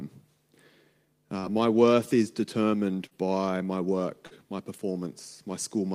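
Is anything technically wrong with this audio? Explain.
Yes. There is short concealed packet loss, three times. It occurs at 1.39–1.46 s, just before "my worth is determined". It recurs at 3.07–3.14 s, between "my worth is determined" and "by my", and again at 4.27–4.34 s, after "is determined by my". Each time, about 40 ms arrived too late. The receiver extended the preceding sound, then blended back. Each patch is a short smear or wobble.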